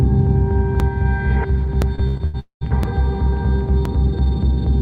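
There's a little stutter at 0.8, 1.82, 2.83 and 3.85 s. These are overlapping chunks: the audio is being handled in roughly one-second blocks, and each new block starts about 20 ms before the previous one finishes, so that sliver plays twice and you get a click right on the join. From 1.95 to 2.36 s it goes choppy and robotic, which is repeated packet loss. Four separate holes get papered over by stretching the last bit of sound, so about half of that stretch is filled-in guesswork, with the longest hole around 80 ms. Right after that, from 2.40 to 2.63 s, the sound smears into a fading tail and then drops to roughly a tenth of a second of near silence before picking up again. That's most likely a long network dropout, where a chunk of around 220 ms simply never arrived and the receiver could only extend what it had before giving up.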